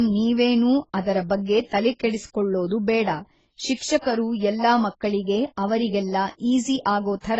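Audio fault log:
throughout: transcoding between lossy codecs. There's a smeared, warbly coding texture with a second layer of grit on top, and nothing above 19.6 kHz. It's likely a low-rate AAC-LC pass around 16 kbit/s re-encoded to Opus near 32 kbit/s, stacking both artefacts.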